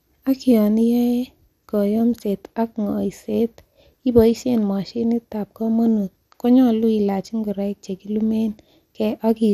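From start to finish the speech carries the damage of likely MP2 compression, at a rate that fits roughly 80 kbps. Layer II divides the spectrum into 32 equal sub-bands and hands out bits among them. Here the budget is too thin, so nothing survives above 15.1 kHz, and the remaining bands are coarsely quantised and flicker in and out. The result sounds dull, with a plainly audible gurgling, granular texture.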